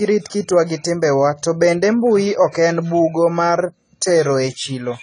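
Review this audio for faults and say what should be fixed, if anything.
The speech is band-limited from start to finish. Nothing is present above about 10.1 kHz, so the top octave is missing and the sound is dull. Coding damage is clearly audible throughout, with a smeared texture. The likely cause is AAC compression at a low bitrate, which fits a rate around 24 kbps. The encoder quantises each frame coarsely against a hearing model and drops the highest bands to save bits. To prevent this, keep a lossless source or encode at a much higher bitrate.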